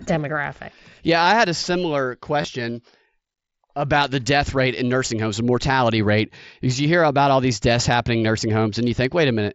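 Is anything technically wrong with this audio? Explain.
Yes. At 2.42 to 2.44 s, just after "I had a similar", there is concealed Bluetooth headset packet loss lasting about 22.5 ms, consistent with three consecutive lost frames. The receiver patched the gap by repeating the best-matching recent stretch of waveform, so the sound turns briefly buzzy and tonal at full level, then warbles slightly as real audio resumes. The mSBC headset codec limits the band to 8 kHz and adds light graininess.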